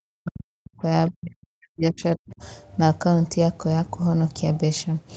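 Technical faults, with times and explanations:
0.0 to 0.82 s, speech suppressed in double talk: the speech starts out heavily attenuated, falling by as much as roughly 40 dB in pieces over about 0.7 s. The likely cause is an echo canceller that could not tell this talker from loudspeaker echo while both sides spoke, so it pulled both down. Unlike packet loss, the gaps come from the echo canceller turning the voice down, not from missing audio.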